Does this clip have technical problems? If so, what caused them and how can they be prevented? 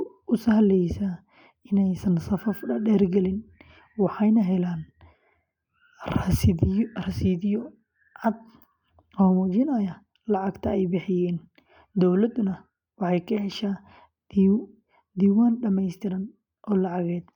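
No, this speech recording has no technical problems that can be heard. Since nothing went wrong, no cause needs explaining and no prevention step is needed.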